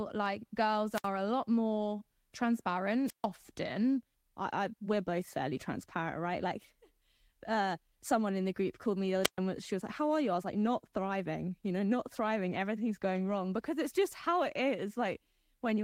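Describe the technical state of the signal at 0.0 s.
At 0.0 s the speech signal is intact, with no technical fault at that moment.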